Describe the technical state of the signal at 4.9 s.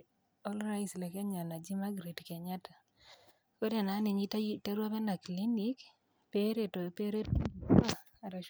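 At 4.9 s the speech signal is intact, with no audible fault at that point.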